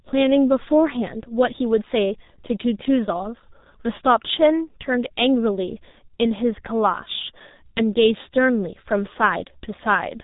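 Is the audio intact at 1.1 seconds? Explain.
No. At 1.1 s, as throughout the speech, the G.723.1 codec is at work. Coding at about 6.3 kbit/s in 30 ms frames cuts everything above 3.8 kHz and updates the voice model slowly, leaving a hoarse, smeared sound with blurred consonants rather than the clean dullness of a simple low-pass filter.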